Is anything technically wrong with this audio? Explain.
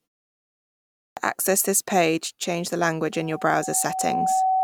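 Yes, two faults. Clipped start after a pause at 1.1 to 1.17 s: after 1.1 s of silence the output device wakes late, swallowing about 69 ms, so "access this page change" begins abruptly. Loudspeaker feedback squeal from 3.12 s to the end, after "this page change the": the microphone re-captures the loudspeaker, and a 755 Hz tone swells over about a second to roughly 5 dB above the speech.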